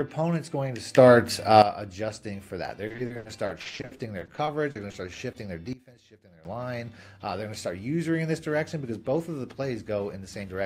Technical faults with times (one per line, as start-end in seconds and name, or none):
0.95-1.62 sudden gain jump
2.87-5.36 repeated packet loss (robotic sound)
5.73-6.45 sudden gain jump